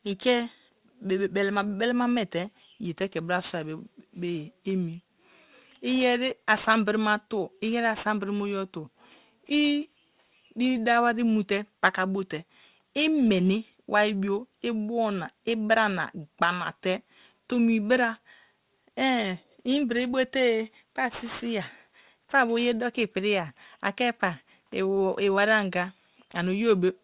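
Aliasing throughout: the speech was downsampled, which fits an 8 kHz rate, without filtering, so content above 4 kHz folds back as gritty, metallic sibilants.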